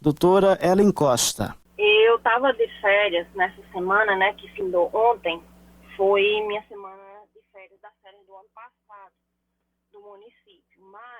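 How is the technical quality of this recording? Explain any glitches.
The technical quality of this recording is sound, with no glitches to explain.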